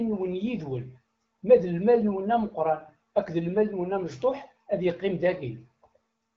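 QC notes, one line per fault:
No faults heard anywhere in this speech recording.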